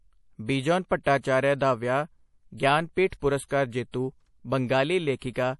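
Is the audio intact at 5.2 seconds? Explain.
No. From 5.19 to 5.22 s there's a pre-echo: about 32 ms of hiss creeping in just ahead of a sharp attack, which then lands soft and smeared. The codec spread its quantisation noise across the whole block, so noise meant for the loud onset also fills the quiet gap before it.

That smear sits on top of the MP3 compression running through the whole clip. Nothing comes through above 11.5 kHz, and the speech has that watery, swirly quality from weak frequency lines flickering in and out between frames. The damage is plainly audible, which fits a low bitrate, likely around 48 kbps.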